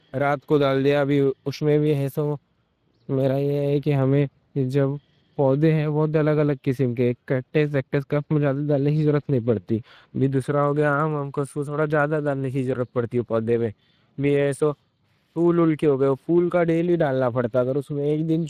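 Throughout, Speex codec damage is plainly audible: a hoarse, noisy CELP grain rather than transform-codec swirl, which fits roughly 22 kbps, and nothing above 15.3 kHz.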